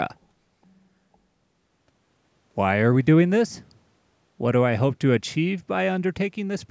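Nothing stood out on listening to this speech, which carries the usual sound of a call's microphone processing, with the lowest bass trimmed.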